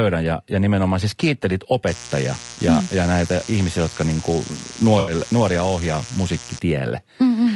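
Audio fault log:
throughout: low-delay AAC compression. The speech sounds rough and grainy. Noise fills the gaps between the voice's harmonics, and the top band sounds thin and synthetic. The likely cause is AAC-ELD, the low-delay AAC of video calls. Its short frames cannot resolve pitch harmonics well, and they cost extra bits. The damage is plainly audible, which fits a bitrate around 32 kbps.
1.87–6.59 s: mains buzz. A steady, raspy buzz sits under the speech for almost five seconds. It is built on 60 Hz, with harmonics reaching up into the kilohertz range. The sharp edge comes from switching spikes twice per mains cycle, as from a dimmer, a rectifier or a missing shield. It sits roughly 15 dB below the speech.
2.53–2.59 s and 4.99–5.13 s: AAC frame loss with concealment. The first gap lasts 40 ms and the second lasts 80 ms. Each sounds like a smeared, noisy or phasey patch. The decoder fills in from the last good spectrum, so the texture holds but the detail is scrambled. 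The first gap points to two lost frames and the second to four, so the second smear is longer.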